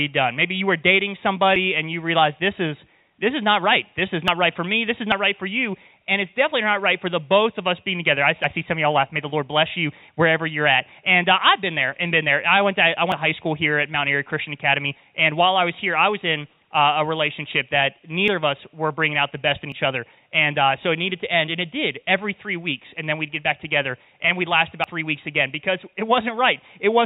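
Dropped buffer (overrun) at 1.56, 4.28, 5.12, 8.44, 13.12, 18.28, 19.72 and 24.84 s. Each is a jump ahead in the sound, likely because hardware overwrote uncollected samples. Around 40 ms is lost at most points and nearer 70 ms at 13.12 and 24.84 s, all within audio band-limited to 4 kHz by the call path.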